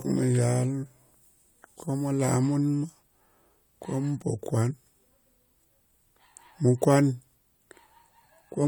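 Nothing stood out as a technical fault on listening to this speech recording.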